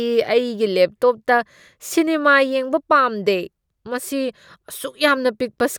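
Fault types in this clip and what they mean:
No audible faults occur anywhere in this speech.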